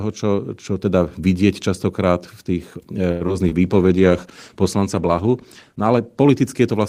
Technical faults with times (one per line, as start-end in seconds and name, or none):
3.11-3.33 short stall from a late packet
3.27-3.53 short concealed packet loss
3.65-6.89 call bitrate drop